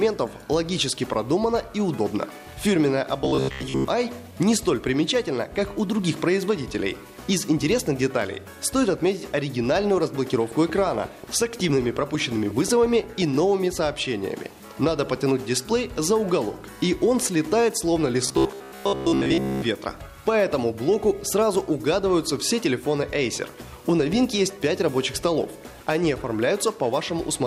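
Robotic sound from repeated short buffers appears from 3.22 to 3.88 s. The sound collapses into a rigid, metallic buzz pitched at 66.8 Hz, and most of that stretch consists of repeats rather than fresh audio. The likely cause is new audio arriving too seldom, so the playback side keeps looping a piece about 15 ms long, one cycle of that 66.8 Hz buzz, while the real material in between is skipped. The original sound still shows through only roughly.

A train of clicks follows from 9.98 to 13.23 s. About twenty similar sharp pulses tick across the sound at a steady 5.55 per second, peaking a few decibels above it. They are heard as regular popping that carries through any quieter moments too. This was likely caused by interference from nearby equipment or a faulty connection or power supply, injecting the same pulse over and over.

The robotic sound from repeated short buffers returns from 18.27 to 19.62 s, this time for longer. 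It has the same 66.8 Hz metallic buzz, with most of the audio again replaced by repeats of a piece of roughly 15 ms.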